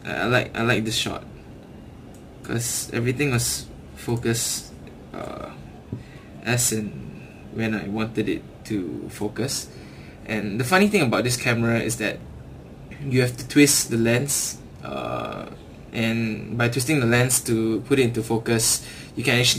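From start to finish the audio carries crude rate conversion, and the pattern fits a 44.1 kHz to 48 kHz change done by nearest-sample picking. With no interpolation or anti-aliasing filter, samples are repeated at a fixed rhythm set by the two rates, creating an error roughly 20 dB below the signal. That error forms tones unrelated to the material, heard as a gritty, inharmonic fizz that rises with loud and bright passages.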